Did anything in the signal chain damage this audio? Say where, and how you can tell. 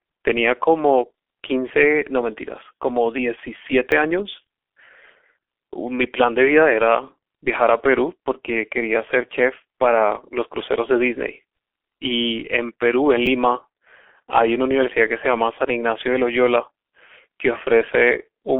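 Yes. At the codec stage, G.723.1 coding at 6.3 kbit/s leaves the speech muffled and hoarse throughout, with nothing above 3.6 kHz and smeared consonants.

At the driver or buffer stage, a repeated buffer causes clicks at 3.91 s and 13.26 s. Late data made the device replay one short segment, which fits a 10 ms buffer.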